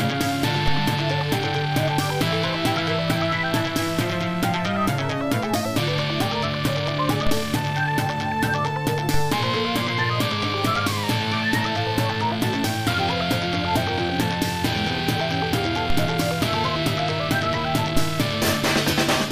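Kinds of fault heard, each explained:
DC step: The waveform's zero line abruptly shifts by about -13 dBFS of offset, then drifts back toward centre as a 2 Hz high-pass lets it decay. Each jump is heard as a short low thump under the sound, which carries on unaffected. It occurs five times, at 0.68, 7.27, 9.14, 15.90 and 17.97 s, each with the same size and recovery.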